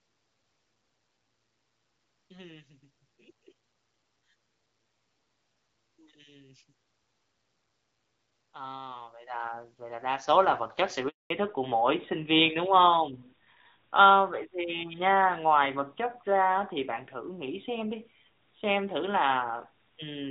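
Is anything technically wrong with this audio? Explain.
Yes. At 9.27 s the microphone volume is stepped up by about 9 dB, and again at 10.29 s by about 7 dB. The call software judged the input too quiet and raised the device gain at once. Voice and background jump louder together.

At 11.08 s a handover gap begins. The call switches networks and no speech frames arrive for 220 ms. The voice cuts off quickly and silence holds until the new link picks up at 11.30 s. That stretch of speech is lost.

From 11.30 s to the end, the call falls back to narrowband. HD Voice at 12.65 kbit/s gives way to an older narrowband codec, which fits AMR-NB at 12.2 kbit/s. Nothing above 4 kHz remains. The speech sounds duller and rougher than before. Up to that point the wideband codec is heard with only light coding damage.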